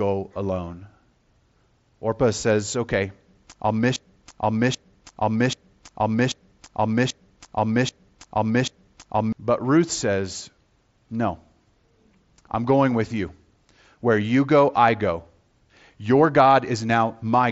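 At 0.66 s there is concealed Bluetooth headset packet loss: a gap of about 7.5 ms, which fits a single lost packet, is filled by repeating the best-matching slice of the preceding waveform. It passes as a barely audible blip rather than the held buzzy tone of a longer run of losses.

From 3.96 s to 9.33 s a broken-record loop takes over. A 786 ms fragment plays seven times back to back, identical each time, and whatever should have followed is gone. Because the repeats are exact and far longer than a concealment patch, the likely cause is a stalled player or stream resending its last buffer.

At 16.45 s a second single packet loss of about 7.5 ms is concealed the same way, again only a faint hiccup. The mSBC headset path underneath keeps the 8 kHz wideband ceiling with only light graininess.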